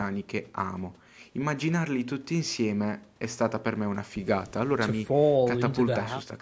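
Nothing goes wrong in this speech; it has simply passed through a call's microphone processing, so the lowest bass is trimmed away and nothing reaches above 8 kHz, which is just how such a path normally sounds.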